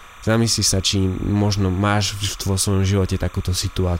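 Timecode bleed runs under the speech for the whole clip, a steady chirping warble roughly 25 dB below the speech. Linear timecode from a neighbouring track or cable has leaked in, its square wave flipping between tones around 1 kHz and 2 kHz at a rhythm that fits 29.97-frame code.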